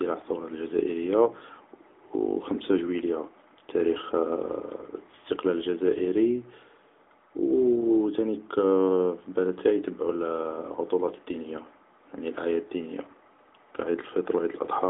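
From start to finish the speech sounds thin, boxed-in and audibly buzzy, with nothing above 3.7 kHz and little below 250 Hz. That is the AMR narrowband mobile codec (AMR-NB). Its plainly audible synthetic edge fits a middling mode near 10 kbps.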